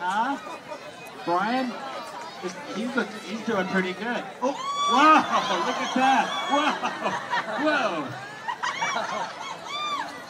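No technical faults occur at any point in the clip, so there is nothing to describe in time order.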